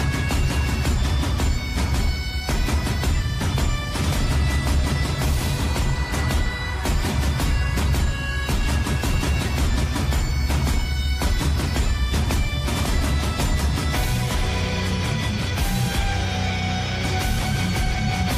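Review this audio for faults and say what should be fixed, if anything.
No faults to report and nothing needs fixing.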